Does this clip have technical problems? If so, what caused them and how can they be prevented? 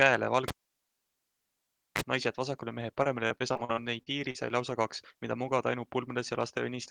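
Yes. From 0.48 to 2.01 s there is a pop, then near silence for about 1.5 s, a brief 30 ms burst of 50 Hz mains buzz, and a second pop as the speech returns: a cable pulled and plugged in while live. Locking connectors, strain relief and muting before repatching prevent this.

From 3.03 to 4.36 s the speech turns choppy and robotic, with ten short holes (the longest 44 ms) covering about a fifth of the span, each papered over by stretching the preceding sound: repeated packet loss. A wired connection, a larger jitter buffer or forward error correction would prevent it.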